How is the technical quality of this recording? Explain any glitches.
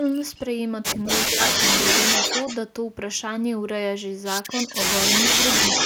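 The recording has clear technical problems: repeated echo of the speech and one brief moment where the talker's voice is pushed down.

Echo leak appears at 0.36–0.41, 1.05–1.17, 1.42–2.57, 4.49–4.75 and 5.03 s to the end. A delayed second copy of the voice trails the original by about 214 to 236 ms. At first it is faint, some 30 dB down. Later it sits only about 5 dB below the speech or matches it, so the speech sounds doubled. This is likely an echo canceller on a speakerphone letting its loudspeaker pickup slip back into the call.

Speech suppressed in double talk occurs at 1.27–1.39, right between echo bursts. For roughly a tenth of a second the voice sags by around 10 dB, briefly pulled back. This likely happened because the echo canceller heard the echo and the talker together, could not tell them apart, and turned everything down.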